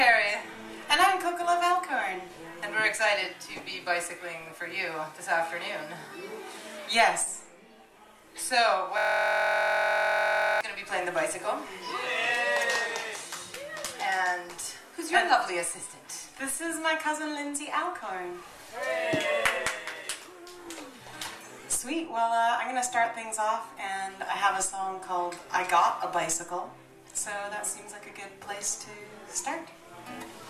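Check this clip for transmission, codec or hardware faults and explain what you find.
One hardware fault is present.

A system hang loop runs from 8.98 s to 10.61 s. The computer or its audio driver stalled, and the sound hardware kept replaying the last filled section of its ring buffer. That section is 23.22 ms long, which fits a 1024-sample buffer, and it repeats 70 times. Because the segment is so short, the audio becomes a steady buzz at the 43.1 Hz repeat rate instead of a stutter.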